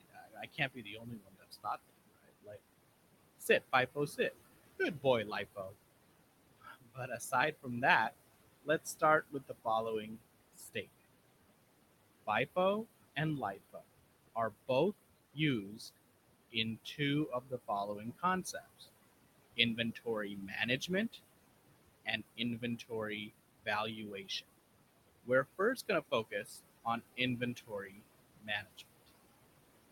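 Noise suppressor artifacts run through the whole recording. The suppressor pulls down whatever it judges to be steady noise by about 21 dB in each frequency band, frame by frame. The room noise, which sits about 13 dB under the speech, dips into near-silence in the pauses and swells back beneath each phrase. This pumping, band-by-band gating is what separates it from a plain noise gate, which would cut the whole signal at once.

Speech cut by the noise suppressor appears from 0.0 to 11.0 s, then again from 12.27 s to 29.9 s. Here the suppressor mistakes parts of the speech itself for noise and turns them down along with the background, by as much as about 22 dB. In the first stretch roughly three seconds are affected in total. Soft consonants and word endings sound swallowed or faint. Unlike the pumping of the background, these are losses in the speech, not changes in the noise.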